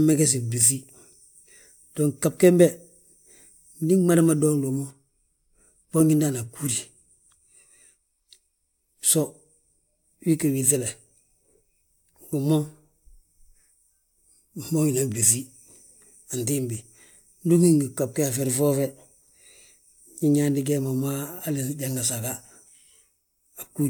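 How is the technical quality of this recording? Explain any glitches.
No technical glitches can be heard in the recording, and the signal stays stable and continuous throughout.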